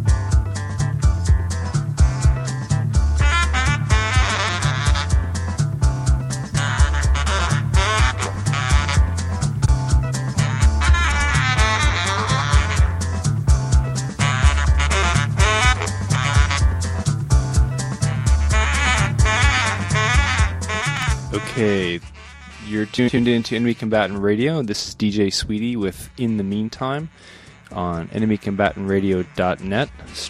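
Frames out of order occur at 4.29–4.49, 8.33–8.45, 9.61–9.69, 11.11–11.30, 16.15–16.34, 20.95–21.03 and 22.98–23.17 s. Two adjacent blocks, mostly about 93 ms each, play swapped, giving a garbled flutter. These show as abrupt vertical breaks in spectrogram and waveform.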